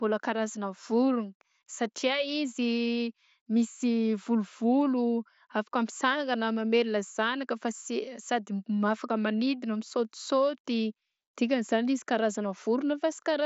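No faults in this speech; it arrives over an mSBC Bluetooth headset link, so the band stops at about 7.7 kHz and loud sounds carry a light codec grain.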